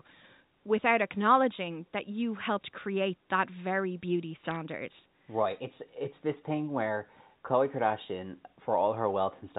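At 4.51 to 4.56 s there's a short burst of bit errors on a digital phone line, a quick cluster of sharp ticks riding over the speech. Some bits in the stream got flipped, at a low rate well under one percent, and each flipped bit corrupts a single sample. Hits on the sign or upper bits jump the waveform hard, hence the clicks. The burst points to a handful of damaged frames on what sounds like a G.711 A-law line.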